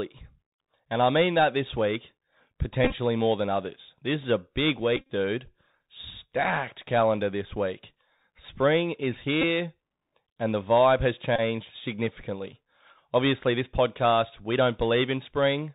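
The whole clip runs through the Bluetooth CVSD headset codec. That's one-bit delta coding at 64 kbps, so nothing gets above 4 kHz, s sounds turn scratchy and a grainy hiss sits underneath. Bluetooth headset packet repeats hit at 2.84–2.95 s just before "more than others", at 4.97–5.12 s after "is a big", at 9.42 s, and at 11.36–11.41 s after "and the vibe has". Lost packets got replaced by replaying the previous one, giving a short buzz near 267 Hz with the longest runs around 30 ms.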